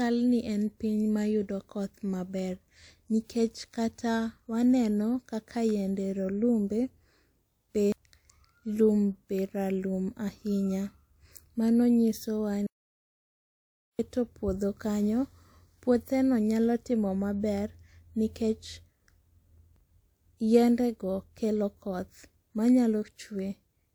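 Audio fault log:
12.67–13.99 s, audio dropout to silence: speech cuts out for about 1.32 s into dead silence with no room tone, likely a lost input, then resumes at "puotho kanyo".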